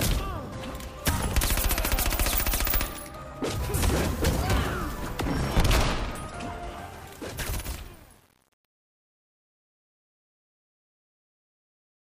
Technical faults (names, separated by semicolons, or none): truncation distortion on a fade